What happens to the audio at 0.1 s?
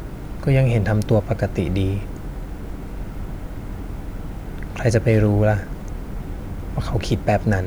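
Nothing goes wrong at 0.1 s; the speech at that point is clean and continuous, with no dropout, click or distortion.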